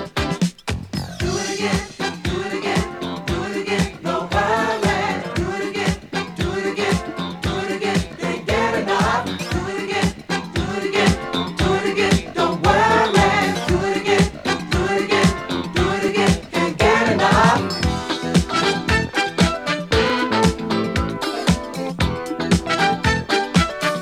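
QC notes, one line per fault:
4.04–20.10 s, clock drift buffer slips: a regular click about every 4.01 s, roughly five in all. This is likely two devices on independent clocks differing by several hundred ppm, so a block of roughly 150 samples is dropped or repeated each time.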